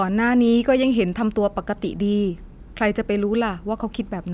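No technical faults can be heard anywhere in the recording.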